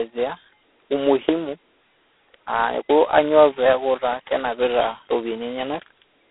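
Throughout, G.726 ADPCM coding too coarse to track waveforms, which fits 16 kbit/s, adds rasping hiss that swells with the speech, unlike steady line noise.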